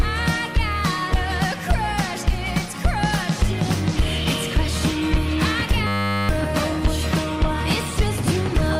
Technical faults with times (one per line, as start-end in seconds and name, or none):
5.87-6.29 system hang loop